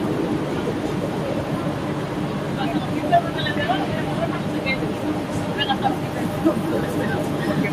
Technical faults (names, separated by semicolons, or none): none